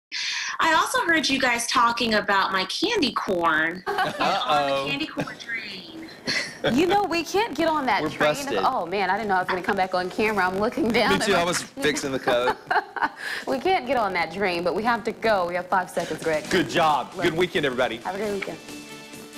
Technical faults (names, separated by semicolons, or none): filter restarted on every block